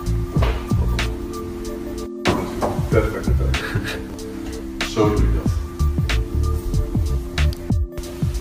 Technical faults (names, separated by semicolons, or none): chunks out of order